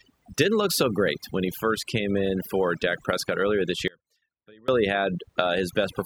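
A noise reduction stage set far too aggressively runs through the whole clip, pulling individual frequency bands down or out whenever they sit near its noise estimate. This overdone noise removal leaves a lowered background flecked with twinkling specks.

At 3.88 s, just after "earlier this", the wanted signal most likely dropped out while the path downstream stayed live. For about 0.8 s, until 4.68 s, this audio dropout to a faint residue leaves only a trace of sound roughly 30 dB below normal, cutting in and out abruptly rather than fading.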